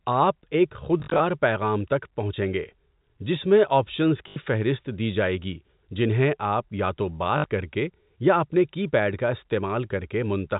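Three bursts of packet loss with last packet repeated occur at 1.0–1.2 s, 4.28–4.36 s and 7.38–7.44 s. Each time the receiver replays the last good packet, so the sound stutters with a robotic buzz near 50 Hz, which fits 20 ms packets. The first burst is scattered, with a longest run of 40 ms. Zero-filled loss would leave silent holes, but this repeats sound. The G.711 telephone band stays intact throughout.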